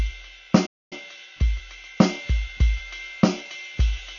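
A short music clip whose whole run sounds dull and smeared, with a fizzy texture, most likely heavy AAC compression at a low bitrate near 24 kbps. At 0.66 s the music drops out for about a quarter second, picking up again at 0.93 s, likely a playback stall where the player ran dry.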